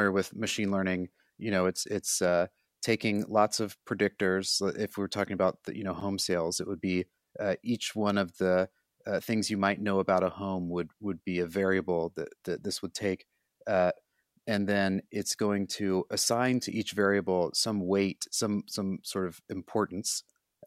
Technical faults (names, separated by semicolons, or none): none